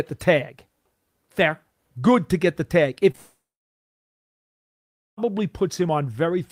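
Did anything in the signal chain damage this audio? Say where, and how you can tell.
Yes. The network stage shows short concealed packet loss at 3.11 to 3.16 s, right after "to get the tag". About 20 ms never arrived, and the receiver patched it by extending the preceding sound, leaving a brief smear. Unlike a dropout, the patched gap lasts only a few hundredths of a second.

Straight after that, from 3.16 to 5.19 s, comes a long network dropout, likely from the connection stalling. About 2 s is missing. The concealment fill fades and leaves roughly 1.75 s of silence. The sound then returns with that stretch skipped rather than delayed, which separates it from a brief concealed gap.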